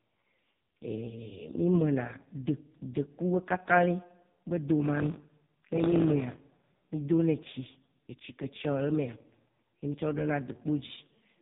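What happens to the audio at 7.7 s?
At 7.7 s the speech is still under the AMR narrowband mobile codec that runs through the whole clip. Nothing above about 3.8 kHz survives, and the heavily buzzy, synthetic vocal-tract rendering points to the codec's lowest mode, near 4.75 kbps.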